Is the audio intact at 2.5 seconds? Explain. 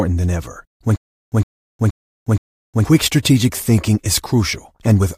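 No. From 0.96 to 2.85 s there is a stutter with silent gaps, likely caused by the player stalling and replaying its last fragment at each retry. A 112 ms burst of speech repeats four times every 473 ms, with 360 ms of digital silence between, and the speech meant for that span is lost.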